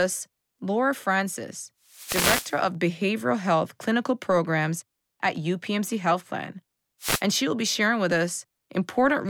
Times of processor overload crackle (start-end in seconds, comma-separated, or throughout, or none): none